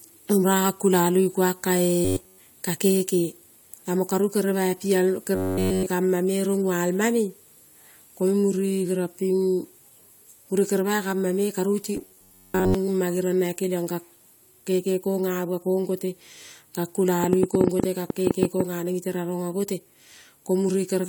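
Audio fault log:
2.05–2.40 s, 5.35–5.87 s and 11.97–12.75 s: robotic sound from repeated short buffers. The sound turns into a rigid, metallic buzz at 93.8 Hz. That rate fits one stretch of about 10.7 ms played over and over. Much of the audio is replaced in the first and third events, and nearly all of it in the second. The likely cause is audio arriving too seldom.
17.24–18.61 s: train of clicks. About 15 similar clicks tick over the sound at roughly 10 per second, with uneven spacing. They stand out about 20 dB above the signal. They likely come from interference, a faulty connection or a power supply.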